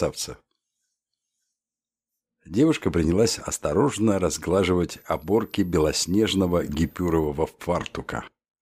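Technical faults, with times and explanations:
4.90–7.27 s, switching supply whistle: a thin, high whistle sits roughly 35 dB below the main sound, its pitch wandering between 11.3 and 13.7 kHz. A nearby switching power supply drops into an audible burst mode as its load shifts, so its switching rate falls into hearing range. On a spectrogram this is a faint, narrow line drifting across that band for about 2.4 s. The waveform barely changes.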